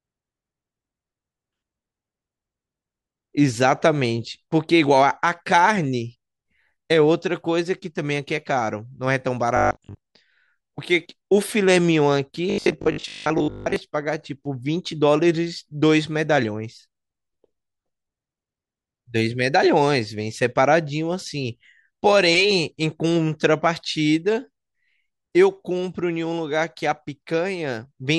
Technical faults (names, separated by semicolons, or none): robotic sound from repeated short buffers